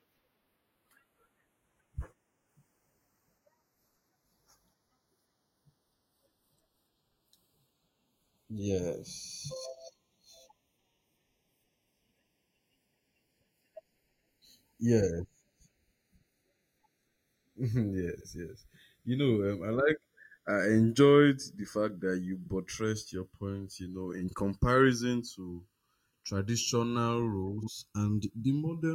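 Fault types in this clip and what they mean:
Channels drifting apart: the two channels run on clocks a few tens of parts per million apart, so their offset slides to under a millisecond by the end. Summed to mono, comb notches creep slowly across the spectrogram, heard as slow flanging throughout the speech.
Frames out of order: at 18.16, 22.43, 24.29 and 27.58 s, two neighbouring blocks of 23 or 46 ms play in swapped order, giving a brief garbled flutter with no time lost.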